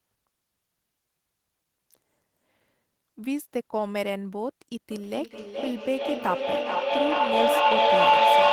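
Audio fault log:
4.91 to 8.53 s: feedback howl. The mic-to-speaker loop gains on each trip, repeating about every 0.4 s and narrowing to a tone near 1 kHz, peaking about 10 dB over the speech.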